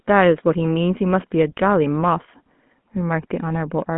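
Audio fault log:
throughout, GSM full-rate codec: the speech has that unmistakable buzzy, gravelly grain, clearly audible the whole way, which fits a 13 kbps GSM full-rate stream. The codec rebuilds the voice from a vocal-tract model fed by a coarse, regularly spaced pulse train, so the fine texture of the excitation gets lost and comes back rough. On top of that, the sound sits in a phone band of roughly 150 Hz to 3.4 kHz, with nothing at all above 3.8 kHz, so it's dull and boxy too.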